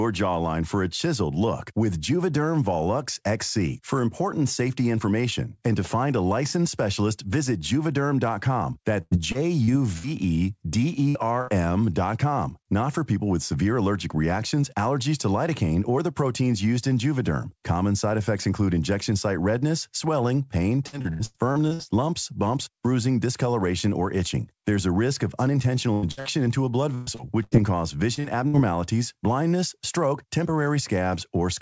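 Choppy, robotic stretches break up this speech recording at 9.02–11.50 s, at 20.86–21.82 s (between "site redness swelling pain" and "lumps bumps bruising discoloration"), and at 25.93–28.57 s, just after "risk of". This is repeated packet loss. Short holes of up to 120 ms arrive in quick succession, and each is bridged by stretching the preceding sound, which makes the speech choppy with pieces missing. Nothing sounds above 8 kHz, which fits a G.722 call codec at 64 kbps.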